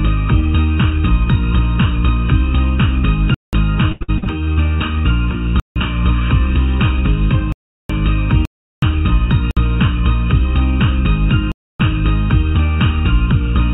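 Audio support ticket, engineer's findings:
Channel delay (comb filtering), throughout. Hollow, phasey tone, with fixed notches starting around 700 Hz. One channel sits under a millisecond behind the other, and summing to mono cancels the shared content at evenly spaced frequencies. Check the capture chain or the downmix.

Block of digital silence, six times: 3.34–3.53 s (186 ms), 5.60–5.76 s (160 ms), 7.52–7.90 s (372 ms), 8.45–8.82 s (372 ms), 9.51–9.57 s (57 ms), 11.52–11.80 s (279 ms). Hard cuts to silence. The output buffer likely isn't being filled on time. The 186 ms and 372 ms lengths fit 8192- and 16384-sample blocks.

Repeated packet loss (robotic sound), 3.92–4.59 s. Choppy stretch with six dropouts, the longest 84 ms. About 39% of that span is patched by concealment that repeats the last sound. Network loss or late arrival is hitting the jitter buffer. The band stopping at 4 kHz is just the G.711 call path.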